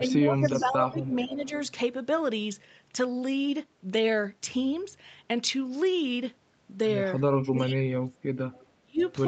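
Speech, carried over an Opus call path whose audio stops at 8 kHz, shows two echo-canceller faults. Speech suppressed in double talk, likely from the canceller failing to tell the near talker from loudspeaker echo while both sides spoke, pulls the voice down from 0.0 to 1.52 s (dips of about 10 dB), from 7.5 to 8.19 s (about 25 dB) and from 8.82 to 9.01 s (about 30 dB), leaving it ducked or partly cut. Echo leak, likely from a loudspeaker side's canceller not removing all of its microphone pickup, returns a copy of the voice delayed by 451 ms at 0.09–0.13, 0.48–0.69, 1.38–1.69, 8.52–8.67 and 8.99–9.13 s, ranging from about 35 dB to about 15 dB below the speech.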